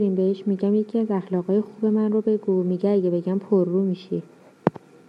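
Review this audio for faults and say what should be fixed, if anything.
Nothing stood out on listening, so there is nothing here that needs fixing.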